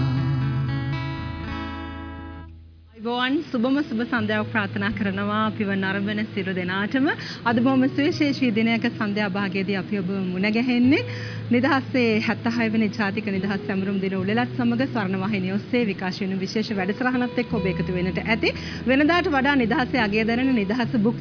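Nothing here calls for comment: no dropouts, glitches or other technical faults turn up anywhere in the clip.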